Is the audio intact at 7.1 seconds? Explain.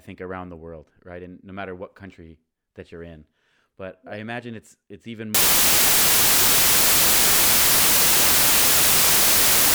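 No. From 5.35 s, right after "imagine it's it's even", to the end, loud, harsh broadband noise replaces the speech: samples built from the wrong bytes, their erratic low bits now dominating each value.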